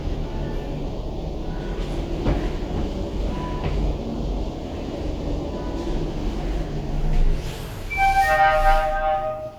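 No technical faults can be heard anywhere in the recording; the signal holds steady throughout, with nothing that points to a problem in how it was captured, processed or delivered.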